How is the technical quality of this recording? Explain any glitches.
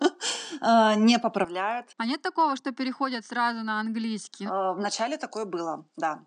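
The recording has one fault, lasting from 1.45 s to the end of the speech.

Input switched to a poorer device, at 1.45 s: the system likely changed to a different, lower-quality microphone partway through. The new device passes a narrower band, with nothing above 9.1 kHz, so the speech suddenly sounds duller. It also drops by roughly 10 dB and brings in a new, faint background noise about 50 dB below the speech. The change happens with no gap in the sound.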